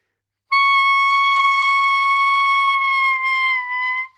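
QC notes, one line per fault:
1.37–1.41 s and 2.65–2.69 s, short concealed packet loss: each time about 20 ms of audio arrived too late, and the receiver extended the preceding sound for 16 ms and 20 ms before crossfading back. Unlike a dropout, there's no silence, just a brief smear or wobble.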